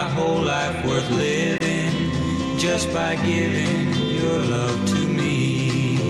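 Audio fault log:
1.58–1.62 s, Bluetooth dropout: the audio cuts to silence for about 23 ms, then resumes as though it had kept playing through the gap. The likely cause is one packet arriving too late at the headphones and being discarded, which fits a single lost frame.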